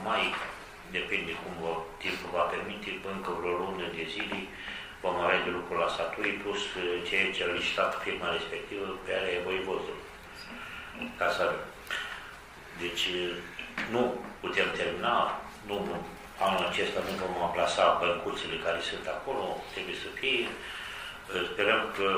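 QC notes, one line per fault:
5.94 to 5.96 s, lost LE Audio frames: a 15 ms gap is patched over, which fits two lost 7.5 ms frames. The LC3 decoder refills the gap by repeating the last good spectrum with scrambled signs. That gives a short, grainy smear instead of a click or a dropout.
7.58 s, lost LE Audio frames: a single 7.5 ms frame goes missing. It is concealed the same way, leaving a brief noisy blur.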